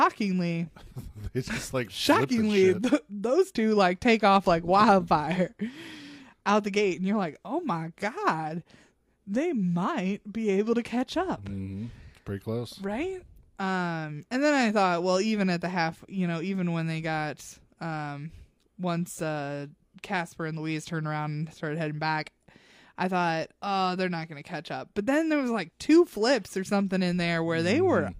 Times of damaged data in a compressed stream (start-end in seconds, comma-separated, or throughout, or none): none